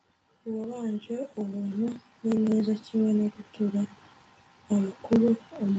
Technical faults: automatic gain rising

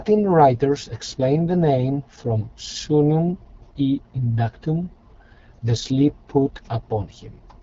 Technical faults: AMR wideband (HD Voice) codec

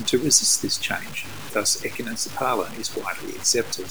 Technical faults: low bit depth without dither

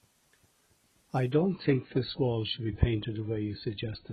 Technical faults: adaptive stream at a lower bitrate

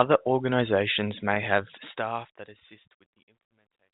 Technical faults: packet loss with pitch repetition; truncation distortion on a fade

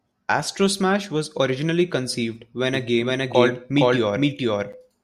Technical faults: doubled audio track

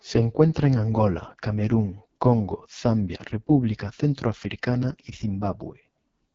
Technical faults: AMR wideband (HD Voice) codec

